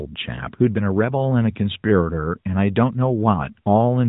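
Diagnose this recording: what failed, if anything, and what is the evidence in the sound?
Nothing has failed here; the speech holds together with no sign of trouble at any stage of the chain.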